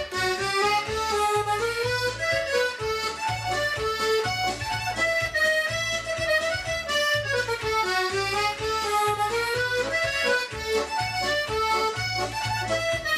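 No technical faults can be heard in this clip. The audio runs without any interruption or disturbance at any point.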